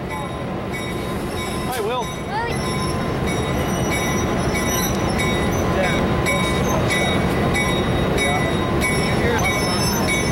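Brief glitches at 2.48–2.52 s, 5.96–5.99 s and 9.35–9.39 s are damaged data in a compressed stream: corrupt frames garble the decoder's output, and it loses sync and searches for the next frame header.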